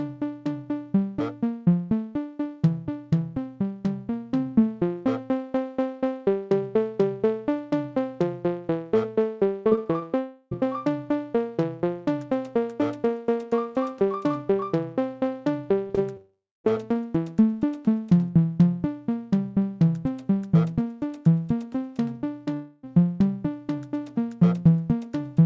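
From 9.70 to 10.03 s the sound turns choppy and robotic: repeated packet loss. Four short holes, the longest 20 ms and about 80 ms in total, were patched by repeating the last sound, so about 22% of that span is synthetic. On a spectrogram this shows as small, flat, copied slices breaking up the texture. The waveform has short stretches of repeating cycles where the natural variation stops.

Right after that, from 10.19 to 10.53 s, the sound becomes a smeared, sustained buzz for about a third of a second and then cuts back to live audio without ever going fully silent. The likely cause is a long network dropout, with the receiver stretching the last fragment across the gap. On a spectrogram the partials run as smooth horizontal lines with no onsets. In the waveform the envelope levels out and slowly shrinks.

At 15.87–15.91 s and again at 15.95–15.99 s there are two brief smears, each 20 ms. 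These are short concealed packet loss, where a missing packet was filled by extending the preceding sound and then blended back. Each one heard alone is a brief smear or wobble. On a spectrogram each appears as a thin vertical seam where the fine detail is blurred.

From 16.17 to 16.66 s a longer gap of about half a second is filled first by a fading continuation of the previous sound. Its last 0.22 s is true silence, most likely a long network dropout. The spectrogram shows stretched partials dimming into an empty column, and the waveform flatlines before the sound returns with that section missing.

From 22.54 to 22.89 s about 0.3 s is again bridged by a drawn-out buzz with no silence, most likely another long network dropout. The audio resumes a few milliseconds late, about 8 ms. It looks like the same smooth horizontal smear on the spectrogram.

Throughout, nothing appears above 8 kHz, a ceiling that fits a wideband call codec such as G.722.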